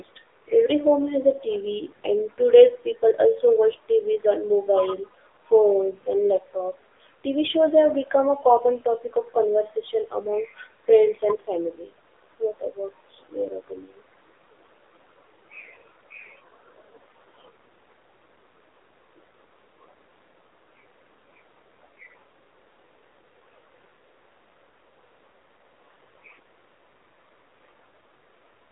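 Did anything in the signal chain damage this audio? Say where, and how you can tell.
Yes. The damage sits at the codec stage and runs through the whole clip: this is the AMR narrowband mobile codec. Nothing survives above about 3.8 kHz, and the speech sits in a telephone band of roughly 300 Hz to 3.6 kHz. The voice has a plainly audible buzzy, synthetic edge, which fits a low AMR-NB mode near 7.4 kbps. The codec models the vocal tract and excites it with a few pulses per 5 ms subframe, so at this bit budget the excitation comes out coarse.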